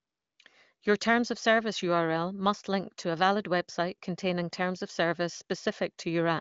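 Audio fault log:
The speech carries the wideband character of AMR wideband (HD Voice) coding, with the spectrum stopping at about 7.4 kHz and a clarity that fits one of the codec's higher bitrates.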